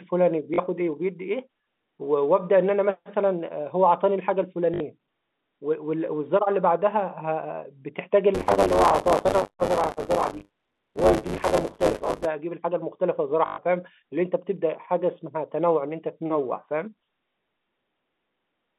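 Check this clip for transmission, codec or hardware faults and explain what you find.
Three short dropouts are concealed by packet repetition, and a stretch of buffer tearing runs through the middle, all heard through a telephone band of about 200 Hz to 3.6 kHz that fits G.711 A-law coding.

Packet loss with last packet repeated occurs at 0.54 to 0.58 s (40 ms), 4.74 to 4.80 s (60 ms) and 13.46 to 13.58 s (120 ms). When audio went missing, the receiver replayed the last chunk it held until fresh data arrived. The replays seldom line up with the speech pitch, and the run buzzes at about 50 Hz, which fits 20 ms packets.

Buffer tearing runs from 8.34 to 12.26 s. The playback hardware and the writing program have drifted so that they cross inside every buffer period. Roughly a third of each buffer replays audio from about 30 ms earlier, with a hard edge on both sides. The result is a steady rattle at 100 Hz, pointing to a 10 ms period, and it is present only while speech is sounding. 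It differs from the packet-repeat stutter because it lasts about four seconds without a break and sits at twice the rate, instead of appearing in isolated bursts.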